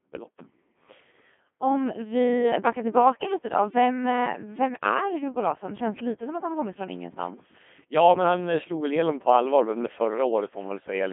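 From start to finish this speech has the Codec 2 vocoder sound, and it's heavy. Codec 2 doesn't keep the waveform at all. It sends pitch, voicing, energy and a rough spectral envelope, then rebuilds the voice from sine waves. So you get that robotic, buzzy quality, with the band squeezed to roughly 200 Hz to 3.5 kHz and nothing above 3.8 kHz. The coarseness fits a low rate of around 2.4 kbit/s.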